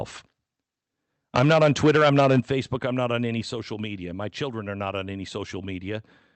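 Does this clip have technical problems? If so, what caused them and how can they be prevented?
Yes. Microphone overload runs from 1.35 to 2.51 s, ending just before "I'm not on any". The loudest peaks are driven about 10 dB past full scale, so their tops are flattened at the converter's ceiling, with around a tenth of the samples sitting squarely on the limit. That squaring of the waveform is what gives those syllables their harsh, crackly edge, and an input gain set too high is the likely cause. Keeping the microphone's input level low enough that the loudest moments peak well below full scale prevents this.

Microphone volume stepped down three times: at 1.39 s by about 2 dB, at 2.4 s by about 7 dB, and at 3.42 s by about 4 dB, the last falling between "I'm not on any" and "social media". Each is an abrupt drop in level that hits the voice and the background together, which points to the call software reacting to the distorted peaks by cutting the device's input volume in a single step. 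The first two land inside the clipped stretch, and the likely trigger is that overload. The drop at 3.42 s comes just after it. Setting a sensible fixed input level beforehand, or turning off automatic microphone gain adjustment, avoids these sudden steps.

The sound also passed through a call codec, and the limited top end fits Opus at about 32 kbps with the audio band-limited to 8 kHz.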